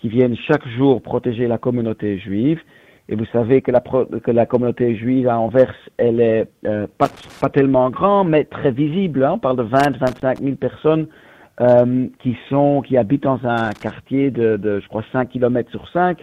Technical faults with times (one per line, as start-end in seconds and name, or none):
7.05-7.41 loose connector crackle
9.80-10.39 loose connector crackle
13.58-13.91 loose connector crackle